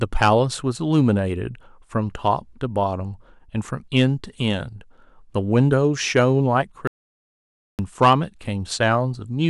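A stage in the chain was driven past its limit at 0.22 to 0.33 s, by about 6 dB, so the speech peaks were sliced flat. This hard clipping adds a crackly, harsh edge. It returns more lightly at 3.96 to 4.05 s, about 2 dB over, and again at 8.02 to 8.13 s, about 5 dB over.

At 6.87 s the input was likely lost, and silence was written in its place. This audio dropout to silence leaves a dead gap of about 0.91 s with no room tone until the speech resumes at 7.79 s.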